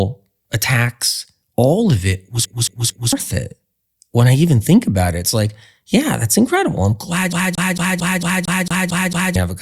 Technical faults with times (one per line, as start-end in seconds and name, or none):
2.45-3.13 CD stuck on one turn
7.33-9.36 CD stuck on one turn